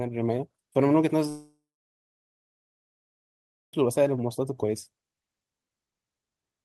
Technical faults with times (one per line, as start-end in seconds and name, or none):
1.29-3.74 long network dropout